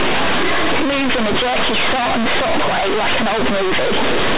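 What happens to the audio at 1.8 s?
At 1.8 s the speech comes with loud, harsh, buzzy distortion with heavy noise where pauses should be, as it is for the whole clip: companded audio read as linear. The mu-law telephone bytes are played as plain 8-bit samples without expansion, so every sign change swings across half the range and quiet sounds come out as loud as peaks.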